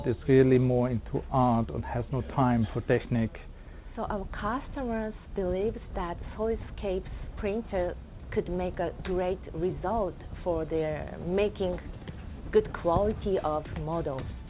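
No technical faults are audible.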